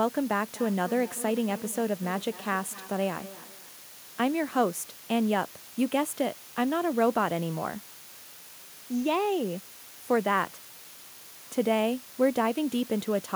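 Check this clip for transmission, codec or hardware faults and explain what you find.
Two faults are present: a constant hiss over the whole recording, and a short stretch of returning echo near the start.

Low bit depth with dither runs through the entire clip. The steady, even hiss sits roughly 20 dB below the speech and stays level. The sound behaves like 6-bit audio: with so few steps, rounding error would turn into harsh distortion, but dither added before rounding spreads that error into broadband white noise. The result is a constant hiss with no audible distortion.

Feedback echo between two devices appears from 0.54 s to 3.79 s. Each phrase comes back at intervals of roughly 0.3 s, with the loudest repeat about 17 dB below the speech, and each return sounds thinner and more ringing. Two devices in the same room are on one call. One replays the other's audio, and that other device's microphone picks it up again. 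Each echo canceller removes only its own device's playback, so the loop continues.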